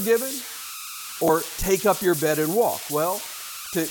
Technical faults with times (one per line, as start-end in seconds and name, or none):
0.00-3.90 converter idle tones
1.28 damaged data in a compressed stream